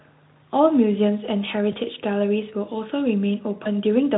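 At 1.71–1.76 s and 3.63–3.70 s, VoIP packet loss concealed by the speech codec: a gap fitting one missing 20 ms frame is filled with extrapolated, buzzy or noise-like, fading sound, seen as a smeared spectrum and a dipping waveform envelope.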